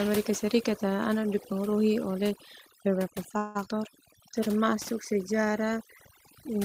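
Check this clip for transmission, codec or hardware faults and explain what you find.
Yes, there are four faults. One runs through the whole speech clip, and three cluster just after "ana dipengaruhi oleh beberapa".

Overdone noise removal runs throughout. Noise suppression set too aggressively cuts individual frequency bands whenever they sit near its noise estimate, taking quiet parts of the voice with them. The background drops and breaks up into twinkling specks.

A call audio freeze occurs from 3.37 to 3.57 s. The sound stalls for 177 ms, with the last fragment drawn out as a fading buzz or hiss before speech resumes exactly where it stopped. Nothing is lost, only delayed. The likely cause is late packets draining the jitter buffer, leaving the receiver to extend what it had.

A skip ahead occurs from 3.65 to 3.68 s. Roughly a tenth of a second of speech is dropped, as happens when an overfull jitter buffer discards queued audio. 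Playback lurches forward, and the two sides are spliced almost directly with only a sliver of fill.

A jitter buffer slow-down runs from 3.79 to 4.66 s. The receiver rebuilt its reserve by repeating single pitch periods and pause fragments, adding 89 ms. Speech plays at about 90% speed at unchanged pitch, so sounds are stretched.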